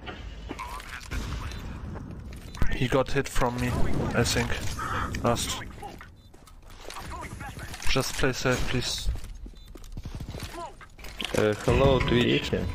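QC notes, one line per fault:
No faults were found in the signal on this pass.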